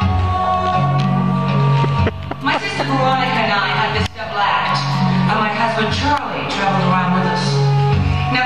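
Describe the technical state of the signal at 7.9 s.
At 7.9 s the signal is intact, with no audible technical fault.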